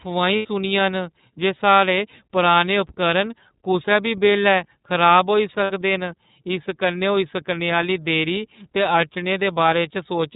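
The whole clip goes through the iLBC codec. It's narrowband, so nothing above 4 kHz survives, and the speech has a plainly audible rough, slightly synthetic edge. That fits iLBC's 30 ms frame mode at around 13.33 kbps, each frame coded independently.

At 0.36 s, just before "न जे", come lost iLBC frames: about 90 ms of packets go missing, which fits three 30 ms frames. The decoder fills the gap by repeating the last pitch cycle with added noise, so you hear a held, buzzy vowel. A shorter 60 ms dropout at 5.64 s sounds the same, and both recover almost instantly.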